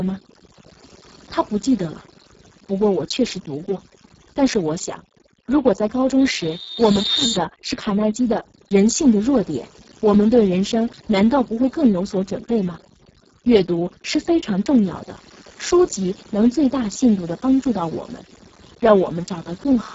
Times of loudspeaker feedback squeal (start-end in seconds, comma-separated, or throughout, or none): 6.19-7.39